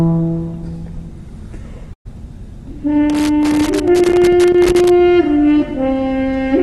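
At 1.93 to 2.07 s there is a burst of packet loss: roughly 120 ms of sound never arrived, and the receiver filled the gap by stretching the last sound into a fading buzz or hiss before playback jumps ahead. The fill fades out quickly, and about 100 ms of the gap ends up as silence.

From 3.10 to 4.90 s comes loose connector crackle, an irregular scratching burst as a bad contact rapidly breaks and remakes the signal. Its ragged, uneven timing and its length of nearly two seconds set it apart from the single concealed gap, and the highs stay cut off above 12 kHz by the call codec throughout.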